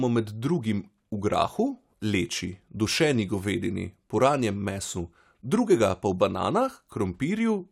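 Nothing in this recording stands out as a technical problem; it's all fine by ear.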